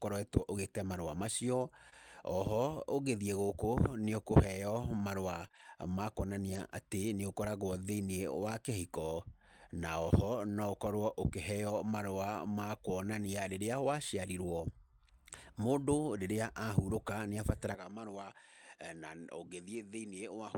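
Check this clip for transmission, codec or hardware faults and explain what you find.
Three kinds of fault appear: brief dropouts hidden by concealment, packets rebuilt from error correction, and a drop in input quality near the end.

Short concealed packet loss at 1.89–1.94 s, just after "marũa macio", and at 5.48–5.55 s: about 20 ms gaps were filled by extending the preceding sound. Each is heard as a quick smear and appears as a smooth, blurred patch on the spectrogram.

Lost packet rebuilt from error correction at 1.92–1.94, 5.44–5.46, 5.55–5.65, 6.53–6.59 and 19.73–19.83 s: the decoder played low-bitrate copies carried in the following packets. These stretches sound rougher and noisier, with a dimmed top band on the spectrogram.

Input switched to a poorer device from 17.75 s to the end: the sound becomes duller, about 10 dB quieter, and carries new noise roughly 40 dB below it, likely from a different microphone. 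The spectrogram is empty above 10.5 kHz, and the waveform steps down in level.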